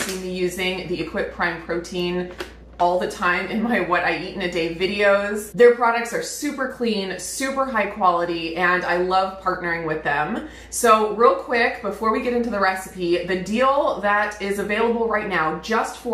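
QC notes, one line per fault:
9.35–9.55 s, DAB burbling: for about 0.2 s the audio breaks into short blips of noise in single sub-bands. Bit errors at a rate of roughly 0.15 percent got past the error correction and corrupted samples, so each affected MP2 frame rebuilds a few bands wrongly. The span fits about eight consecutive frames. Unlike a packet-loss dropout, the sound never goes silent, and unlike low-bitrate swirl, the artefacts are brief and jumpy.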